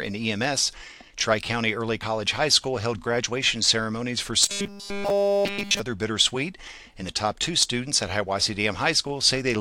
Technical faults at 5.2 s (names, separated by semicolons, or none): robotic sound from repeated short buffers